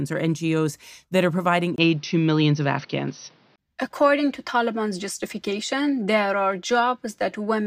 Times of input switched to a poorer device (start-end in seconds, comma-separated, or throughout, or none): 1.76-3.58